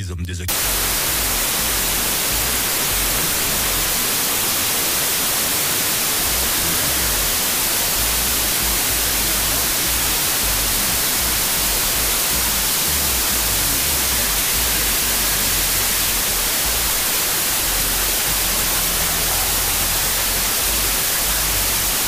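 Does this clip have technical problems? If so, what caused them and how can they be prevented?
Yes: a wrong sample width from 0.48 s to the end. The data were read with half the bytes per sample they were written with, which fits 32-bit samples read as 16-bit. That produces loud noise with the original sound buried in it, running at half speed and an octave low. To prevent it, carry the sample format in the file header or stream metadata and check that the reader's format matches it.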